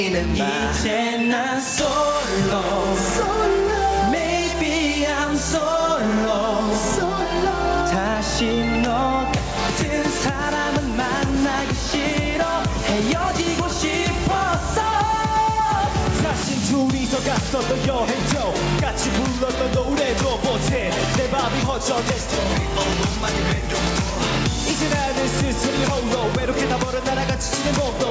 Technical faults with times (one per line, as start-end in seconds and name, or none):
0.00-28.10 gain pumping